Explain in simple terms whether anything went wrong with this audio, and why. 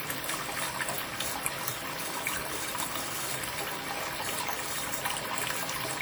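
Yes, something went wrong. From start to finish, the sound has plainly audible WMA compression damage. It was likely squeezed down with the Windows Media Audio codec to save space. This kind of codec saves space by throwing away detail it judges unimportant. Here it threw away too much. The result rings and smears, so sharp moments lose their edge. A hiss swells and fades along with the sound itself.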